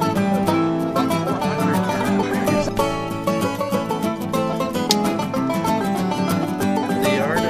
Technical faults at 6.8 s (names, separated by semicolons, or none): audio missing between chunks